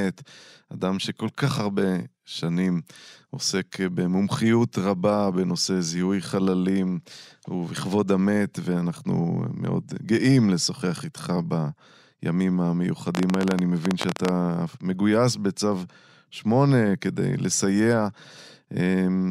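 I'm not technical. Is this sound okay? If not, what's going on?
No. Likely electrical interference or a faulty connection caused a train of clicks from 13.15 to 14.29 s, about twenty uneven pops over the speech.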